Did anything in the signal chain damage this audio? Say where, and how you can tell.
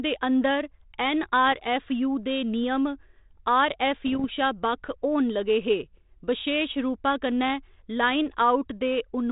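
Yes. This is bit errors on an ADPCM link, at the transmission stage. Rough pops with brief level jumps hit at 1.52 to 1.60 s and, denser, at 4.06 to 4.34 s. Each flipped bit derails the decoder's step size and predictor, so the damage rings on briefly.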